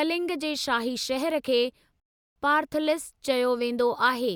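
A speech recording with one rebuffering stall: right after "जे शाही शहर खे", around 2.00 s, the audio drops to silence until 2.36 s, then picks up exactly where it left off. The player ran dry and waited for data, adding about 360 ms.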